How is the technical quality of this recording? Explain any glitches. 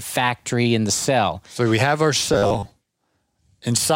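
The recording has one clear glitch: robotic sound from repeated short buffers, from 2.34 to 2.72 s. For that stretch the speech turns into a stiff, metallic buzz fixed at 100 Hz that loosely tracks the speech. The cause is likely audio arriving too slowly, so playback keeps looping a 10 ms slice, with about half the real signal skipped. A steady forced pitch sets it apart from a dropout's silence or a clock warble's drifting pitch.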